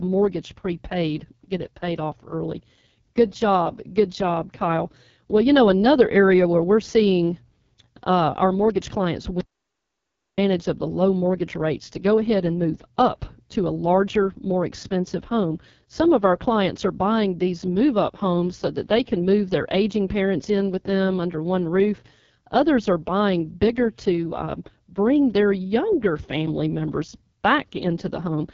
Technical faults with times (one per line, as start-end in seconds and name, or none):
0.00-28.53 AMR wideband (HD Voice) codec
9.41-10.38 audio dropout to silence